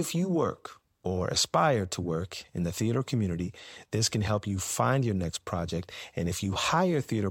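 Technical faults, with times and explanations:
No technical faults can be heard in this recording.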